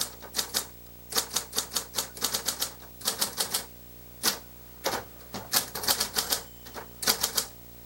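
Throughout, video or display buzz: a screen or video cable couples into the audio, giving a 59.94 Hz field-rate buzz with hash, a 15.7 kHz line tone, roughly 15 dB under the signal.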